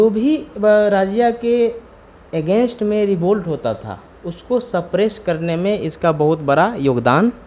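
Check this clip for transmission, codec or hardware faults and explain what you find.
No transmission, codec or hardware faults can be heard; the signal stays continuous and stable throughout, with nothing in it that points to a problem in the chain.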